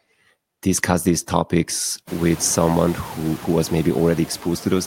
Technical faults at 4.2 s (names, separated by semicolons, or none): noise suppressor artifacts